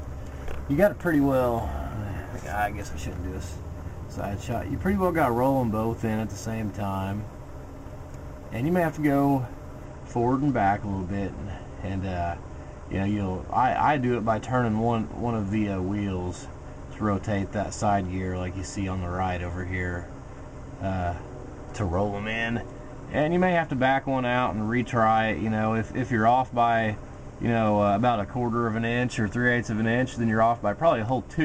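From the start to 9.84 s there is crude rate conversion: samples were simply repeated to stretch the rate, which fits a 32 kHz to 44.1 kHz change, giving a gritty, inharmonic fizz roughly 30 dB below the signal. A spectrogram shows faint mirrored tones unrelated to the harmonics; the waveform shows small stair-steps.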